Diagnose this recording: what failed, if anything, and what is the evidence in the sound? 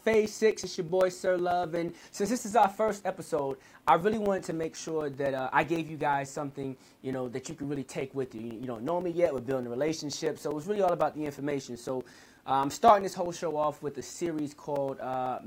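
A steady ticking runs through the audio from 0.14 s to 15.39 s, a small pop every 0.125 s (eight per second), each one a gap of a few milliseconds filled with silence, around 150 in all. The failure sits at the driver or buffer stage: periodic USB or driver dropouts. Something on the system stalls the USB bus or audio driver at a fixed interval, so each stall drops a short slice of samples and the output falls briefly to silence.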